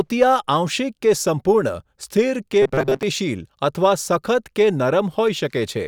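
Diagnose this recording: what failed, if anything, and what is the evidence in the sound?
Robotic sound from repeated short buffers, 2.62 to 3.03 s after "સ્થિર કે": speech becomes a rigid 134 Hz buzz, likely driver-buffer underruns looping 7.5 ms blocks.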